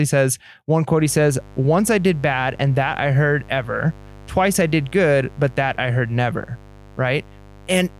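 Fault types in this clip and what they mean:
Mains buzz: A steady, raspy buzz comes in at about 0.99 s, right after "says one", and runs to the end of the clip. It's built on 50 Hz, but it sounds gritty rather than like a pure hum because sharp switching spikes, from something like a dimmer or rectifier or from poor shielding, add a stack of harmonics reaching into the kilohertz range. It sits roughly 25 dB under the speech, so it stays audible throughout.
Dropped samples: Two isolated, sharp clicks, one at 3.60 s and one at 5.45 s. Each is a single tick that shows as a thin vertical line across the spectrum. The likely cause is a sample or so going missing from the stream, which makes the waveform jump abruptly to a later value. That gap is only a tiny fraction of a millisecond, far too short to remove any audible sound. What you hear is the discontinuity itself.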